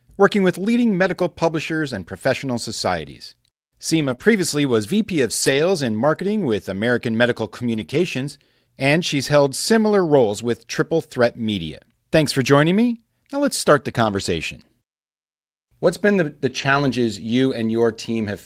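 Right around 3.95 s the speech goes rough and a bit grainy for roughly a tenth of a second, through 4.13 s. That's a lost packet rebuilt from error correction. The original packets never arrived, and about 100 ms of audio, which fits five 20 ms packets, was played from the low-bitrate backup copies carried in the packets that followed. There's no gap, just a coarser, noisier stretch where the cheaper copy stands in for the real thing.

Just after that, at 4.15 s, comes a short concealed packet loss. About 20 ms simply didn't arrive in time, and the decoder filled roughly 24 ms by extending whatever sound came just before and then blending back into the real signal. What you hear is a tiny smear or wobble, over by 4.20 s.

Straight after, from 4.20 to 4.22 s, there's one more lost packet rebuilt from error correction, a single 20 ms frame taken from the backup copy, so the graininess flickers back briefly before the full-quality audio resumes.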